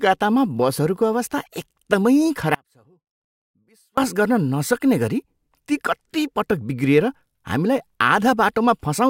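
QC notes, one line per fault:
2.55–3.98 s, audio dropout to a faint residue: the speech cuts out abruptly for about 1.43 s, leaving only a faint leak of sound roughly 35 dB below its normal level, then snaps back in mid-flow. The wanted signal was likely lost upstream while the path after the break stayed live, which is why the gap is not true silence. Unlike a natural pause or a fade, both edges are sudden and the residue sits far too low.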